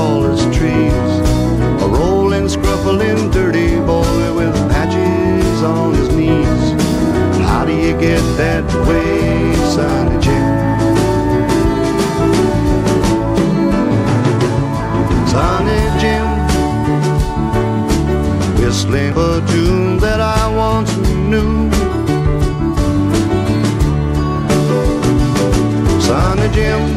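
At 19.12 to 19.15 s there is a brief burst of damaged data in a compressed stream, heard as a short chirp or blip lasting about 30 ms. A stretch of the encoded bytes is corrupt, so the decoder misreads those frames, loses sync and hunts for the next valid frame header before resuming. On a spectrogram it appears as a thin vertical smear of broadband or oddly banded energy; the waveform shows a discontinuity there.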